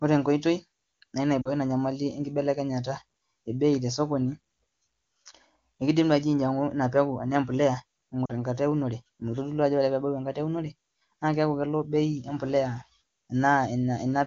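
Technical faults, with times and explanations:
1.42–1.50 s and 8.26–8.31 s, lost AMR speech frames: two corrupted frames each time made the decoder reuse its last speech settings at falling gain, leaving brief drops to near silence.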